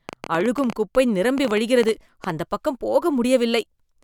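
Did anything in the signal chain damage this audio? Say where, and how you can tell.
Yes: a train of clicks, about 20 irregular pops, roughly nine per second, runs from 0.09 to 2.31 s before "அந்தப் பக்கம்", peaking about 5 dB above the speech. They show as thin vertical broadband lines on a spectrogram, likely from interference in the analogue wiring.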